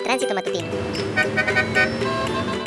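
From start to finish the audio runs at 1.5 times its proper speed and about 7 semitones high: a wrong sample rate, played back without conversion. Tempo and pitch rise together by the same ratio, which fits 16 kHz material played at 24 kHz.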